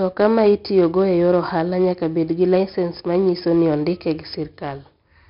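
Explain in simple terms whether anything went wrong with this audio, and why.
4-bit ADPCM compression affects the whole clip. Storing rough guessed steps leaves gritty hiss on loud speech. Nothing above 5.3 kHz survives, so it sounds dull.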